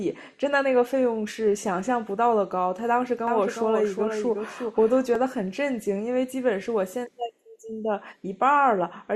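From 3.27 s to 5.15 s the speech is likely being captured a second time by a slower path, so a doubled audio track appears. A full-band copy trails the original by roughly 0.4 s, only a few dB quieter, about 5 dB down. It carries no decay or room colour, so it sounds like a second voice trailing behind rather than an echo, and it cuts in and out abruptly at both ends.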